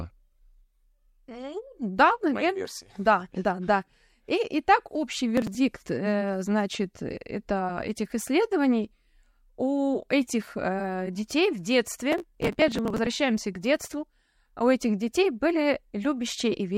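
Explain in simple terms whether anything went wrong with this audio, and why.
Two short bursts of gritty crackle tear through the speech. The first is brief, from 5.37 to 5.55 s, right after "и так общий". The second is longer, from 12.12 to 13.07 s, after "у этих детей в". This is processor overload crackle. The computer couldn't keep up, so it repeatedly missed its deadline for tiny slices of sound, a few milliseconds each. Those slices were dropped, leaving hard-edged gaps that blur into crackle until the load eased.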